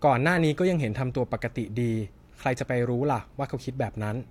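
No faults detected anywhere in the speech recording.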